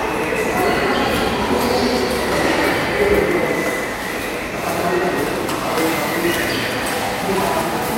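At 5.71 to 5.76 s, repeated frames: a 52.2 ms block, about two compressed frames, plays twice, causing a brief stutter. The waveform and spectrogram show that stretch duplicated back to back.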